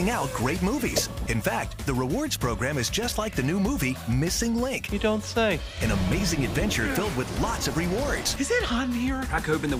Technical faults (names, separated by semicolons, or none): none